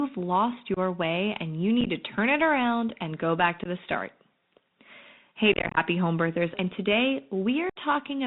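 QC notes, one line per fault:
Throughout: Bluetooth CVSD headset codec at 64 kbps. One-bit up/down coding caps bandwidth near 4 kHz, roughens s sounds and leaves granular hiss under the speech.
0.74–0.78 s, 1.81–1.88 s, 3.64–3.67 s, 5.52–5.78 s, 7.70–7.77 s: unconcealed Bluetooth headset packet loss. Missing voice packets leave abrupt holes, chopped and crackly across 5.52–5.78 s, with a 67 ms gap at 7.70 s.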